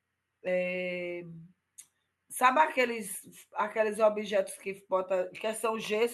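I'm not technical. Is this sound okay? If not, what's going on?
Yes, this recording sounds fine, with no technical problems to be heard anywhere in it. There is nothing here that needs fixing.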